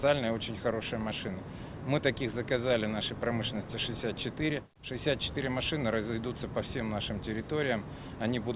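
No technical faults are audible.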